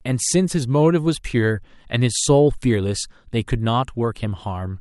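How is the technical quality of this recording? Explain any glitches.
No technical faults turn up anywhere in the speech, so there are no glitches to explain.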